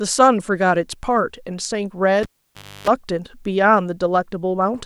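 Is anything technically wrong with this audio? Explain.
Yes. From 2.23 to 2.88 s the cable is pulled and plugged in: a pop, 0.59 s of near silence that includes 0.3 s of 50 Hz mains buzz as the tip touches, then a second pop. That buzz marks physical reconnection, unlike a clean digital dropout.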